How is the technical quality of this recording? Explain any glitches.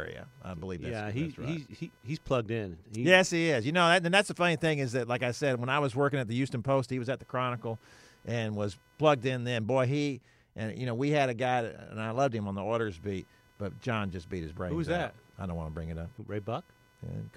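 The recording carries one technical fault, computer activity noise, which runs through the whole speech clip. Changing processor, graphics or mouse load shifts the ground that the audio circuit shares with the computer, and that fluctuating current leaks into the signal path. The result is a thin buzzing chirp pulsing at roughly 500 Hz, sitting around 40 dB below the speech. It rises and falls with what the computer is doing rather than with the talking, so it stays audible in pauses.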